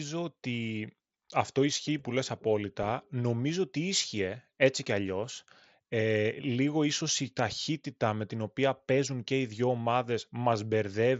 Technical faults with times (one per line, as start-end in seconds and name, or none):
none